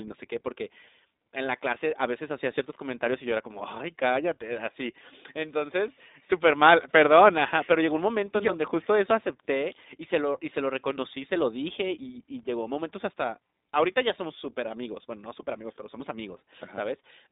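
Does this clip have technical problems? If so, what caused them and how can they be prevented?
Yes. Throughout the clip the speech has passed through the iLBC codec, a narrowband VoIP coder that encodes each frame's excitation independently of the previous frame. The roughness fits a 15.2 kbps mode with 20 ms frames. The passband runs from about 250 Hz to 3.7 kHz, with nothing above 4 kHz, so the speech sounds thin and muffled. The codec damage is plainly audible as a rough, slightly synthetic texture. To prevent this, record or transmit with a wideband codec or uncompressed audio instead of routing the call through an iLBC path.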